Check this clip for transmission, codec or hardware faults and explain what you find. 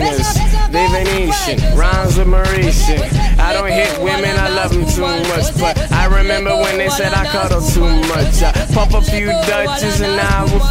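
There's one hardware fault here: sample clock jitter, starting at 4.59 s and running to the end. The converter's clock wobbles by something like a microsecond, so each sample lands a touch early or late. That timing error turns into an amplitude error wherever the waveform is changing fast, which puts a hissy roughness roughly 40 dB under the signal. You'll hear it ride up on loud, bright passages and disappear in the quiet bits.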